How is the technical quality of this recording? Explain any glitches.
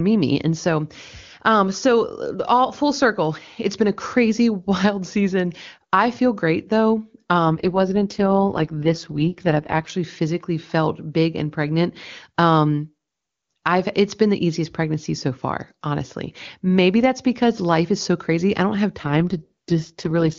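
It's wideband phone speech, the sound of AMR-WB (HD Voice), with two stretches where the codec rate drops.

AMR rate drop, 7.47 to 9.90 s and again from 19.01 s to the end: the network throttles the codec, which fits 23.85 down to 6.6 kbit/s, so speech turns rough, raspy and synthetic without any gap.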